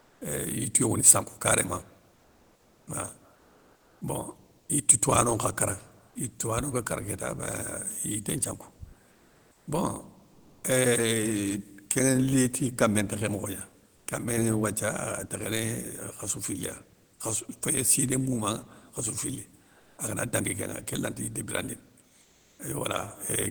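In eight pauses in the speech, the quiet background gives way to a flat, featureless hiss. This happens at 0.0–0.21 s, 2.15–2.87 s, 3.35–4.01 s, 9.11–9.67 s after "yité nthiankou", 10.31–10.63 s, 13.95–14.07 s, 19.77–19.97 s between "siné moumanŋa khassou fili" and "agana dangui kénŋa kén", and 22.21–22.59 s after "kén lanata yité birandini". The hiss sits up to about 6 dB quieter or about 5 dB louder than the real background around it. This is comfort noise in place of the background, likely from Opus discontinuous transmission: the sender stops sending audio when its voice detector hears no speech, and the receiver fills each gap with synthetic noise.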